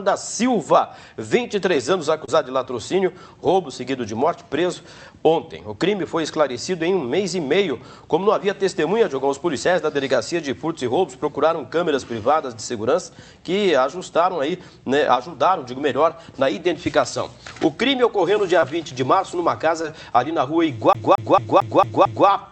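Short concealed packet loss at 2.25 to 2.30 s, 18.60 to 18.64 s and 19.82 to 19.86 s: each time about 20 ms of audio arrived too late, and the receiver extended the preceding sound to cover the gap before merging back, leaving a brief smear or wobble.

CD stuck on one turn from 20.93 to 22.28 s: a scratch keeps throwing the laser back to the same point, so a 0.22 s slice repeats six times, each jump marked by a short mute, giving the quick, regular stutter of a skipping disc.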